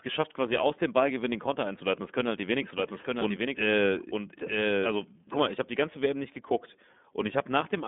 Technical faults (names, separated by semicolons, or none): iLBC codec; doubled audio track